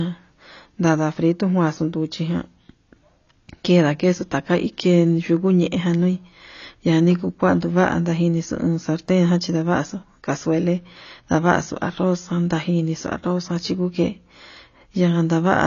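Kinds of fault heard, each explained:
AAC compression: the speech has a dull, band-limited sound, with nothing above about 6.9 kHz, and a warbling, fizzy texture on sustained vowels and sibilants that is plainly audible from start to finish. This points to AAC-LC at a low rate, roughly 24 kbps. The likely cause is an encoder short of bits. It lowers the cut-off and quantises the frequency lines coarsely, so detail is smeared or replaced. On a spectrogram the energy stops at a hard shelf near 6.9 kHz, with patchy gaps and blotchy texture below it.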